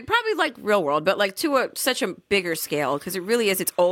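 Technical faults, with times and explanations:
2.52–3.91 s timecode bleed: after "to a such a", a faint warble, roughly 35 dB down, flips between about 1 and 2 kHz in a 30-frame rhythm, unlike a single steady whistle.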